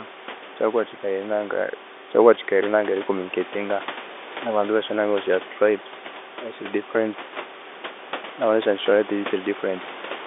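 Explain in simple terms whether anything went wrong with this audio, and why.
Nothing went wrong; it sounds like an ordinary phone call.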